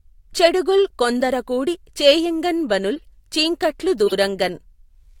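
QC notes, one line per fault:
2.96–3.04 s and 4.06–4.13 s: corrupt frame decoded. Damaged compressed frames were played as though valid, each lasting a few frames. Misread codes and gains put energy at wrong frequencies. Each is heard as a chirp, squeak, blip or burst of noise, the second much louder than the first.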